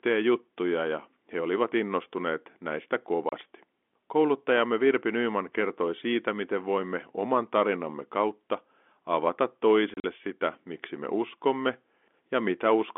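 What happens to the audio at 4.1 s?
Nothing goes wrong at 4.1 s: the speech carries on intact through that moment, still within the narrow band of the G.711 telephone coding.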